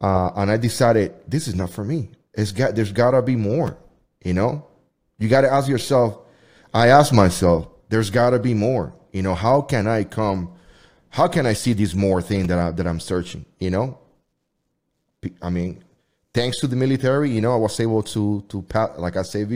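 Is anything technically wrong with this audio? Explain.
Yes. Repeated buffers at 3.68 s and 12.45 s: playback briefly ran out of new audio, so the last block of about 5.8 ms (consistent with a 256-sample buffer) was played twice, dropping a few milliseconds of speech. Each instance is heard as a short click or brief buzz.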